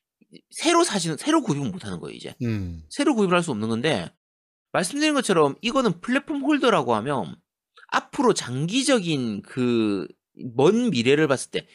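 No technical faults are audible.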